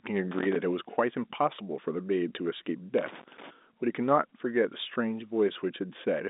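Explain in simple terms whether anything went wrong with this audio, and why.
Scratchy bursts of crackle interrupt the speech from 0.31 to 0.56 s and from 2.98 to 3.51 s. This is loose connector crackle: a worn contact kept breaking and remaking the connection.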